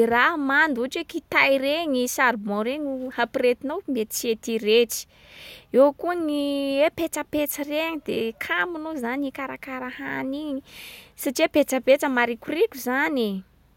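No technical faults can be heard anywhere in the speech.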